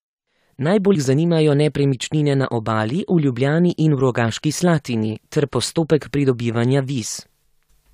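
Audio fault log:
0.94–0.96 s, compressed frames skipped: about four 23.2 ms frames, roughly a tenth of a second of speech, are never decoded, so the audio jumps ahead just before "zanimajo nepremičnine na". Overlapping frames smear the join into a brief blip, not a silent gap or sharp click.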